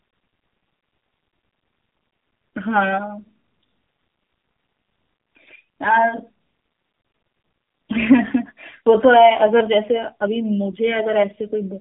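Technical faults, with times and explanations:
Throughout, AMR narrowband mobile codec: the speech sits in a telephone band of about 150 Hz to 3.6 kHz and sounds plainly buzzy and synthetic, which fits a low AMR-NB mode around 7.4 kbps. The codec rebuilds each 20 ms frame from a vocal-tract filter driven by only a few pulses. On a spectrogram, energy stops at a hard ceiling near 3.6 kHz, and harmonics look smeared and blocky from frame to frame.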